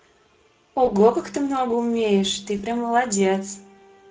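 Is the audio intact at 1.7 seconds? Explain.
No. At 1.7 seconds the speech carries Speex codec damage, which runs through the whole clip. The hoarse, noisy quality fits a mid-low setting around 16.8 kbps, where this CELP coder has too few bits to model the excitation faithfully. On a spectrogram the harmonic striations look smeared and broken up by grainy fill between them. The waveform's periodic voiced cycles appear rougher and less regular than clean speech.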